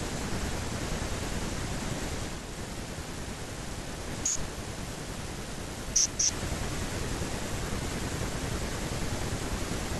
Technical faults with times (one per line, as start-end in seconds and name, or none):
2.26-6.38 digital radio blending to analogue